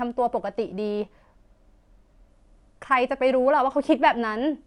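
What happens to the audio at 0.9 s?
At 0.9 s the speech is inside a stretch of imaging from linear upsampling that runs from 0.80 to 2.30 s, which fits a 24 kHz source raised to 44.1 kHz by straight-line interpolation. That weak filter dulls the top of the original band and leaves a faint mirrored copy, roughly 50 dB down, between 12 kHz and 24 kHz. It is heard as a light metallic shimmer on sibilants. On a spectrogram, the energy below 12 kHz reappears flipped above that line.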